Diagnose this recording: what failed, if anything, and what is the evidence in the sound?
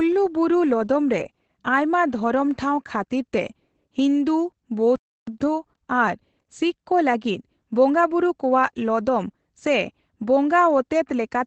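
The codec stage is the culprit here: this is Opus voice compression running the SILK coder in wideband. Nothing comes through above about 8.5 kHz, and the speech sounds muffled and a bit hoarse and robotic, which fits a low rate around 12 kbps.

There's a playback stall right after "ᱴᱷᱟᱣ ᱠᱷᱟᱹᱛᱤᱨ ᱛᱮ ᱦᱤᱱᱫᱩ". The sound cuts out from 4.96 to 5.27 s, about 317 ms of silence, then picks back up. That's likely the player starving for data or its thread getting blocked until it recovered.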